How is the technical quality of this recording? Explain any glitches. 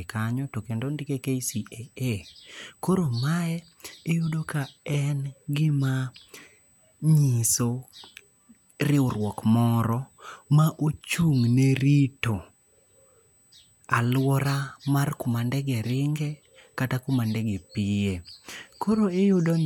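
The recording carries a faint, steady USB whine for its whole length, a fixed 8 kHz tone sitting roughly 40 dB below the speech. It comes from the bus drawing current every 125-microsecond microframe, leaking through power or ground. Unlike low-pitched mains hum, its pitch sits high and never drifts.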